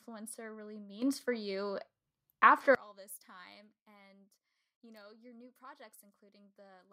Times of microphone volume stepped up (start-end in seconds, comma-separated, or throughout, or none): 1.02